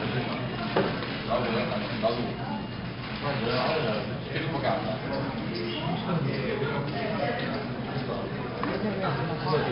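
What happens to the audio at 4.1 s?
At 4.1 s it's the 4-bit ADPCM compression running through the whole clip. Coarse predicted steps leave heavy gritty hiss, with nothing above 5.3 kHz.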